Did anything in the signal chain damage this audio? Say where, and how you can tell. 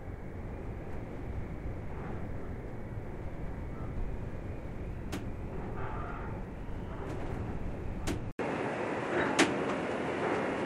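Yes. From 8.31 s to the end, the sound drops out for 80 ms, then returns with nothing above 11.4 kHz, a modest level shift and a new noise floor about 30 dB below the signal. This is likely an input switched to a poorer device at the driver stage. The gap and changed noise floor set it apart from a codec bandwidth cut.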